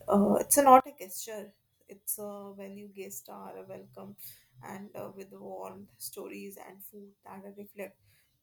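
From 0.80 s to the end of the clip, the speech drops by about 21 dB when the channels are summed to mono, with the centred voice and low end largely gone. The likely cause is one channel inverted: with one stereo channel's polarity reversed, material common to both cancels in the sum, leaving only the small difference between the channels as a faint residue of the speech.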